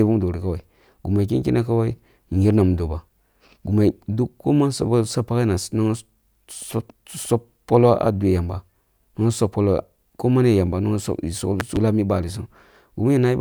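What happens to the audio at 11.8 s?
A sudden voltage step, likely from a plug, switch, static discharge or driver glitch, gets added to the signal between 11.60 and 11.79 s, and the circuits downstream shape that spike into a short pulse. The result is a loud pop, two sharp pops in quick succession, standing about 15 dB above the speech. The speech keeps running underneath rather than dropping out, so the clicks sit on top of it.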